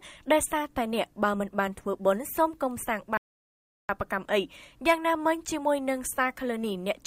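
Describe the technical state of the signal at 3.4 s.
At 3.4 s the signal sits inside a rebuffering stall. It runs from 3.17 s to 3.89 s. The player has used up its downloaded audio and halts while it waits for more data. The sound drops abruptly to silence for about 0.72 s. It then picks up exactly where it broke off. No material is skipped. The pause simply adds 719 ms to the running time.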